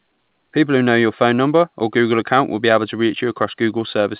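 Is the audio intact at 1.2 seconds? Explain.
Yes, the speech at 1.2 seconds is intact, heard through the WebRTC call path with its telephone-band coding that leaves nothing above 4 kHz.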